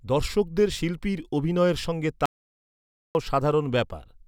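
A speech clip with an audio dropout to silence. At 2.26 s the sound cuts off mid-flow. It returns at 3.15 s. The gap lasts about 0.89 s. It is silence, with no room tone or background noise underneath. Whatever was spoken in that stretch is lost. The input likely dropped out through a disconnected device, a failed link or an accidental mute. Meanwhile the recorder kept writing silence.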